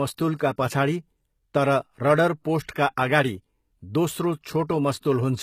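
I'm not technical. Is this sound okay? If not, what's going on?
No. This speech recording shows low-bitrate audio saved at a high bitrate, most likely from being squeezed into a small, heavily compressed file and later re-saved as a large, high-quality one. The re-save can't restore what the first squeeze discarded. From start to finish, the sound lacks crisp top end, with nothing above about 14.9 kHz, and keeps the smeared, swishy texture of heavy compression. A bigger file doesn't mean better sound here.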